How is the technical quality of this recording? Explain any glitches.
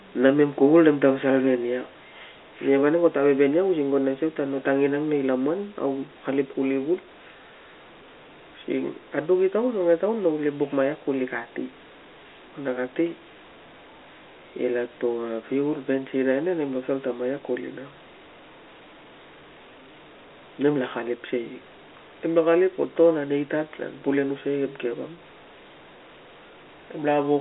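No glitches can be heard anywhere in the recording. The speech carries the narrow band of an ordinary G.711 telephone line, running from about 250 Hz up to 3.4 kHz.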